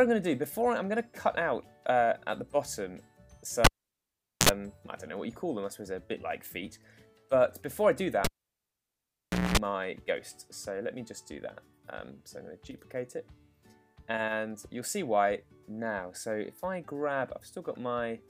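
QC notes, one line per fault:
3.64–4.49 s and 8.25–9.57 s, cable pulled and plugged in: a live lead is yanked out and reinserted twice. Each event opens with a pop as the contact breaks, then near silence for about 0.8 s the first time and 1.28 s the second. A 60 Hz mains buzz follows, 58 ms and then 227 ms long, while only the plug tip touches and the unshielded input picks up hum. A second pop marks the full reconnection as the audio returns.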